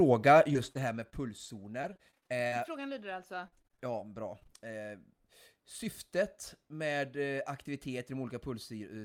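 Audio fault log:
0.49–4.70 s, repeated packet loss (robotic sound): the speech breaks into about twenty short holes, none longer than 42 ms, and each is bridged by stretching the last fragment of sound. Around a second of the stretch is rebuilt this way, giving a choppy, robotic texture with pieces missing. Unlike a steady codec warble, it starts and stops with the dropouts, and unlike a fader dip, the level doesn't change.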